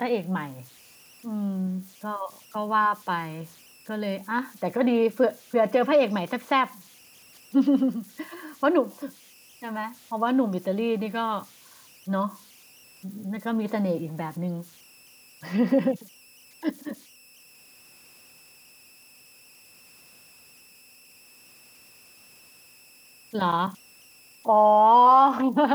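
Throughout the recording, a faint whistle sits in the pauses between phrases, pitched somewhere around 3 kHz, and turns into a grainy hiss beneath the quieter stretches of speech, about 31 dB below the signal. These are converter idle tones: the delta-sigma converter, running without dither, locks into repeating bit patterns whenever its input is small, and those patterns emerge as a tone whose pitch follows the input's offset.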